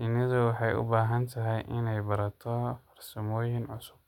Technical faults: none

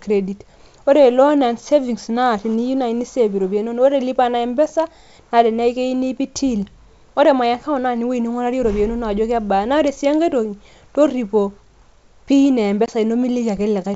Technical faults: packet loss on an ADPCM call

